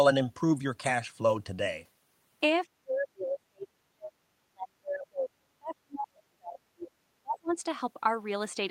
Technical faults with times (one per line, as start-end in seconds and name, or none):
2.77-4.17 speech suppressed in double talk
4.44-6.91 speech suppressed in double talk
7.22-7.54 speech suppressed in double talk